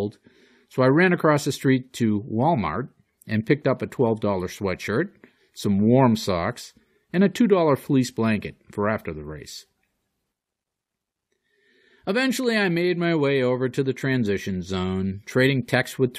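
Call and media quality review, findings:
No faults found in audio.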